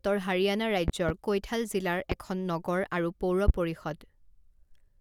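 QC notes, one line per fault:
0.88–1.12 s, 2.12–2.15 s, 3.48–3.52 s: loud pop. A double pop, then two single pops, about 15–20 dB over the speech, which continues underneath. Likely voltage spikes from static or switching.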